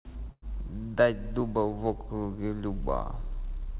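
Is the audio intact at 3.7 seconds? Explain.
Yes, the speech at 3.7 seconds is intact, with no dropout, glitch or distortion, only the narrow, telephone-like band with nothing above 4 kHz that fits a G.711 call codec.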